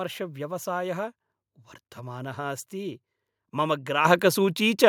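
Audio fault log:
4.05 s, microphone volume stepped up: the call software judged the microphone too quiet and raised the device's input volume in a single step, so right after "अस्ति मम" the speech and the background noise jump up together by about 8 dB.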